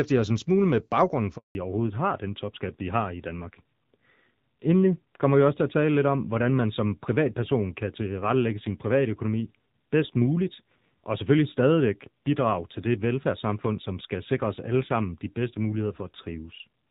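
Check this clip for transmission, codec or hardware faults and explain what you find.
Two transmission faults occur close together early in the call, and the second lasts to the end.

At 1.37 s, just after "en smule med baggrunden", the speech fades out within a few tens of milliseconds and stays silent for 180 ms, until 1.55 s. This is a handover gap. The call was being switched between networks, and no speech frames arrived while the new link came up, so whatever was said in that moment is gone rather than muffled.

From 1.55 s to the end, the speech sounds duller and rougher. Sibilants and breathy detail lose their crispness because nothing remains above 4 kHz. This is a fallback to narrowband. After the handover, the call left HD Voice for an older narrowband codec, and the rasp fits a low rate of around 7.4 kbit/s on AMR-NB. Before the switch, the wideband AMR-WB speech is clear, with only light coding texture, consistent with about 12.65 kbit/s.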